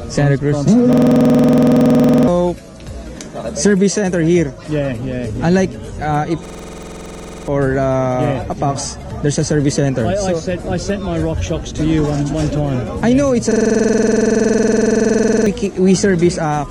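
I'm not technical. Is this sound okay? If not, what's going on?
No. Three times, from 0.93 to 2.28 s, 6.46 to 7.48 s and 13.51 to 15.46 s, the sound jams into a rapid machine-gun stutter, one tiny 46 ms scrap repeating about 21 times a second, and then jumps ahead. This is a system hang loop: the computer briefly froze while the sound hardware kept replaying its last small chunk of audio, so about 1.5, 1 and 2 seconds of the real sound are lost.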